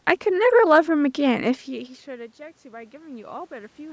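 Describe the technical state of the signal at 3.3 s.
At 3.3 s the signal is in the middle of an automatic gain rising event, running from 1.27 s to the end of the clip. After the input fell by about 24 dB, with the talker moving back around 1.5 s, the gain control is gradually adding about 7 dB, so speech and room noise swell together.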